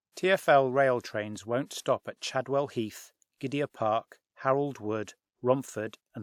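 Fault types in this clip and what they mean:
Pre-echo: a short hiss smears in just before a sharp speech attack at about 1.66 s, spreading roughly 49 ms ahead of it. The codec's quantisation noise, sized for the loud onset, is spread across the whole transform block and fills the quiet gap before the attack, which sounds softened.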